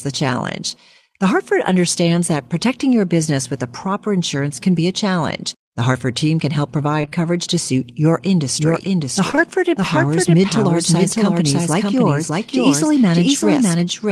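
Short concealed packet loss in this speech clip hits at 5.37–5.41 s, then in runs of back-to-back gaps at 7.01–7.13 s and 9.31–9.39 s. Each hole is about 20 ms, which fits lost 20 ms packets. The decoder bridged each one by extending the preceding sound, as a pitched continuation or shaped noise, before blending back into the real signal, leaving brief smears and wobbles that are longest in the three-gap run near 7.1 s. A doubled audio track begins abruptly at 8.48 s and lasts to the end. A second full-band copy, roughly as loud as the original, trails it by about 0.7 s, with no decay or room colouring, so it sounds like an exact repeat rather than an echo. The likely cause is the same signal being captured again through a slower path and mixed back in.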